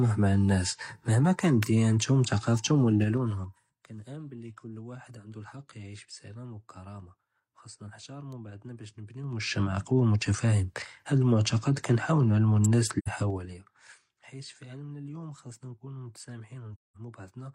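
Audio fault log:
1.63 s, 8.32 s and 12.64 s, electrical switching spike: a nearby switch or motor arcing, likely coupled into the audio line, adds a brief burst of energy lasting only a few milliseconds. Each is heard as a sharp, dry snap sitting on top of the speech rather than part of it. The third lands just after "אלמעתכד כנהאול נעלמו". None of these has the ring or decay that a real acoustic event would carry.
2.97–3.81 s, 9.10–9.66 s and 13.19–13.65 s, zipper noise: the gain is moved in 3 dB jumps with no smoothing, so each jump puts a small discontinuity in the waveform. The first run drops about 20 dB at roughly seven steps per second, ending just before "כנעמן בלי קול ואחד". The second rises about 20 dB at roughly ten per second, right after "בעדנא באש". The third falls about 20 dB at roughly fifteen per second. Each is heard as audible ticking riding on the speech while the level moves.
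12.98–13.08 s and 16.74–16.97 s, AAC frame loss with muting: lost AAC frames were decoded as silence, and the overlapping transform windows taper the sound into and out of the gap. This fits two frames lost in the first hole, about 85 ms, and five in the second, about 213 ms. Each is heard as a soft-edged dropout.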